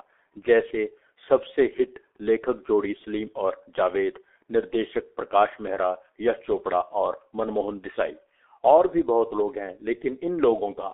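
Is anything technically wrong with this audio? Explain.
Yes. Throughout the speech, a G.723.1 codec has squeezed the signal into a narrow telephone band of 300 Hz to 3.5 kHz and rebuilt each long frame from a coarse, slow-moving voice model, which fits a rate near 6 kbit/s. The result is heavily muffled, hoarse speech with smeared consonants.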